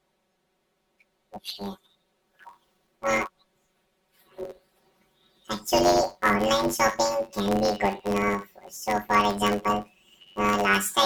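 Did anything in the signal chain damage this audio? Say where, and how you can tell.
Yes. Throughout the speech there is a robotic buzz at about 94 Hz, with no clear octave shift. This is planar audio read as interleaved, at the driver or buffer stage. Each short block, about 10.67 ms (which fits a 512-sample buffer), holds all its left samples and then all its right samples, but it is read as alternating pairs. Each half plays at double speed, one after the other, so the pacing holds while the repeating block boundary buzzes.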